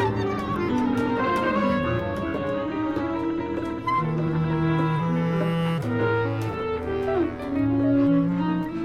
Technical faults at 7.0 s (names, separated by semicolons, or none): none